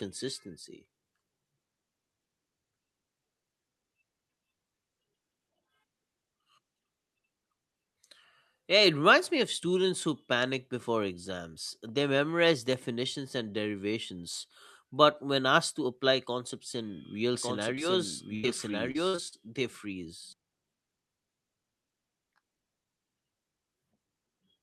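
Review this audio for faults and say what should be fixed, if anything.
Doubled audio track, 17.35 to 20.33 s, just after "apply concepts in real": a second full-band copy, about as loud as the original, trails roughly one second behind, dry and starting and stopping abruptly, most likely from a duplicate capture path. Make sure only one input path feeds the mix.

Short concealed packet loss, 17.75 s, also right after "apply concepts in real": 20 ms never arrived, so the receiver continued the preceding sound and blended back, leaving a brief smear. A larger jitter buffer would let late packets arrive in time to play.

Burst of packet loss, 18.35 to 18.45 s: about 80 ms went missing together; the gap was filled by stretching the last sound while fading it, then the audio jumps ahead. Forward error correction or redundancy would let the receiver rebuild consecutive losses.

Repeated packet loss (robotic sound), 18.91 to 19.42 s: four gaps, the longest 52 ms, were patched in quick succession, about a third of the stretch, giving a choppy quality. 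Fixing the congested or unstable network link would stop these recurring drops.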